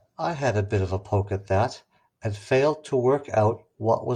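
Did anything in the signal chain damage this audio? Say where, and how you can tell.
No, nothing along the way has left a mark on this speech recording that I can hear, so there's no damaged stage to point to.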